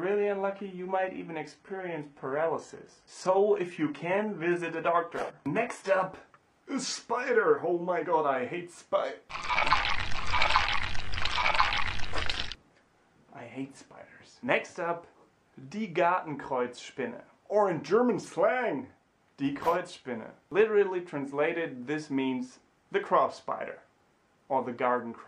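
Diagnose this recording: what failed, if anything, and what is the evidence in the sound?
Adaptive stream starting at a low bitrate, at the playback and codec stage. For the first 6.0 s the treble sounds synthetic and nothing reaches above 11.8 kHz, as from the replicated highs of a very low-bitrate HE-AAC stream. At 6.0 s quality jumps with no gap to a cleaner sound, consistent with AAC-LC near 96 kbit/s. A dropout or rebuffer would break the audio instead.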